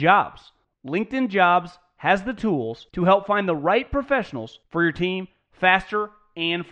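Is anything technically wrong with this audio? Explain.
No technical faults are audible.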